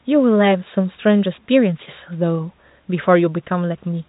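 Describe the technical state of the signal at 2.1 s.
At 2.1 s the speech is intact, with no fault at that moment; it sits within the G.711 telephone band, so nothing above 3.8 kHz is present.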